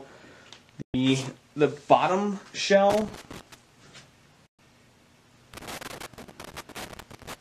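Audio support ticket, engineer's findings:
Digital broadcast dropout at 0.82–0.94 s and 4.46–4.59 s: clean 120 ms mutes with fast fades, consistent with about five failed frames at receiver. Silent holes, no crackle, unlike a contact fault.

Loose connector crackle, 2.90–3.54 s and 5.54–7.34 s: irregular scratchy bursts from an intermittent contact chopping the signal. Noisy, ragged, not a clean mute, so not decoder-side.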